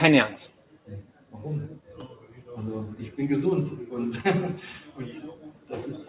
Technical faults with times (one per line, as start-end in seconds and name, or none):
0.00-6.09 noise suppressor applied to music or sounds
0.50-1.34 sound cut by the noise suppressor
1.79-2.45 sound cut by the noise suppressor
4.80-4.98 sound cut by the noise suppressor
5.35-5.72 sound cut by the noise suppressor